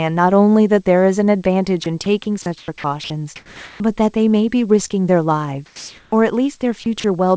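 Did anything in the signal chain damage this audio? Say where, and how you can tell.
Yes. The damage happened in call processing and on the network.

Sound chopped by the voice detector, likely: at 1.84–2.06, 2.42–3.10 and 6.84–7.04 s, speech edges become flat synthetic noise, seen as smooth gaps in the spectrogram's harmonics.

Sound dropped by the voice detector, likely: from 3.36 to 3.80 s speech gives way to steady comfort noise, so the waveform's syllable envelope flattens into a uniform band.

Short concealed packet loss: at 4.88–4.92 s a brief smear replaces a missing fragment, seen as a blurred, repeated slice before the real audio resumes.

Comfort noise in place of the background, likely: at 5.66–6.12 s the textured background becomes featureless noise about 2 dB quieter, an evenly grey spectrogram patch below the G.722 cutoff at 8 kHz.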